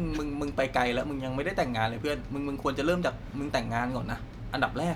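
No technical fault can be heard anywhere in this short speech recording, and the signal stays steady throughout.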